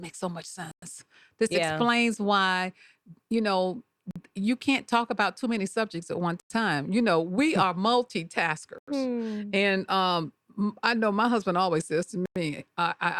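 Bluetooth stalls cut the speech to dead silence at 0.71 s after "so much", 4.11 s after "explains why you know", 6.40 s, 8.78 s after "are multitaskers", and 12.26 s, lasting roughly 50 to 110 ms each. They appear as flat, empty gaps in the waveform and spectrogram, likely from the headphone buffer running dry while interfered packets were resent.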